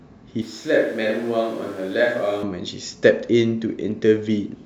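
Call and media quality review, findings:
Switch to a distant microphone, 0.42 to 2.43 s: speech abruptly turns roomy and hollow, bass thins, level drops about 5 dB, room noise rises to about 25 dB below speech, with a sudden return at 2.43 s. Likely close-mic dropout, with a far device picking up.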